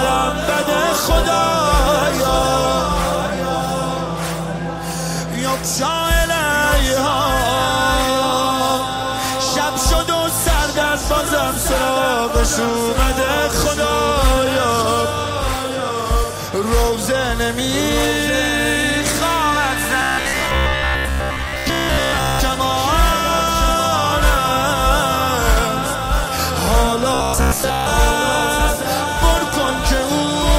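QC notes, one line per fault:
Throughout: doubled audio track. A second full-band copy trails about one second behind, roughly 5 dB quieter, with no reverb tail. The likely cause is a second capture path or misaligned edit. Waveform shows a repeated envelope shifted by about a second. Spectrogram shows ghost patterns.
12.94–13.03 s: DAB burbling. Weak reception let bit errors slip past error correction into the MP2 data, corrupting samples across 7 frames. Wrong samples put short blips of noise into single sub-bands, producing a brief burble. Spectrogram shows isolated blocky bursts in narrow bands.
20.02–22.40 s and 27.14–27.89 s: robotic sound from repeated short buffers. Most incoming audio is skipped while the last short slice is looped, likely from audio arriving too seldom. The 66.8 Hz buzz fits a roughly 15 ms buffer and gives a rigid metallic drone. Spectrogram shows evenly spaced harmonic comb lines. 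Waveform shows identical repeating cycles.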